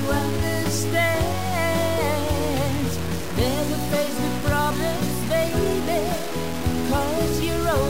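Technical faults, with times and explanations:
Throughout: low bit depth without dither. A grainy distortion, only about 15 dB below the signal, follows the sound and swells and fades with it, which fits a likely truncation to about 4 bits.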